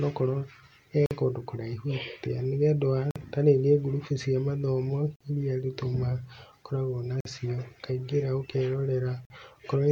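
The speech stops five times in short holes: 1.06–1.11 s, before "kũndũ kũraihu atĩa"; 3.11–3.16 s, after "ũndũ wa"; 5.16–5.21 s, after "cia mathomo"; then 7.21–7.25 s and 9.25–9.30 s. This is a gap between chunks. The audio arrived in 2-second pieces. About 48 ms of silence sits at each join. Nothing is lost, but the flow breaks regularly.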